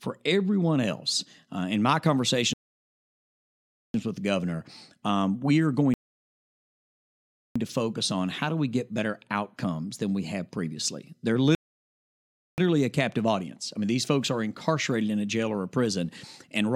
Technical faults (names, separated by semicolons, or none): rebuffering stall